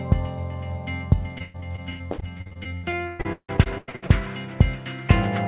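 From 1.38 to 4.1 s, repeated packet loss (robotic sound) chops the audio into a robotic stutter. Over twenty holes, the longest 159 ms, are patched by stretching the previous sound. Unlike a single dropout, the gaps keep recurring rather than leaving one silence. The call path's 4 kHz band limit is audible throughout.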